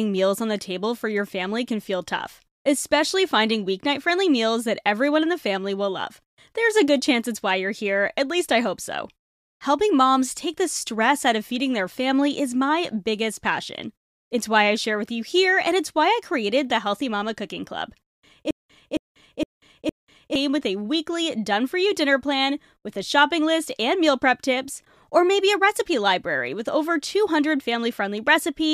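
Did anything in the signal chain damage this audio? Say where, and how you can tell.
Yes. From 18.5 to 20.4 s, just before "with a weekly done", a broken-record loop replays one 0.46 s fragment four times back to back, likely from a playback or stream buffer that stalled and kept resending its last block. The repeats are identical and do not decay, unlike an echo, and the speech they replaced is lost.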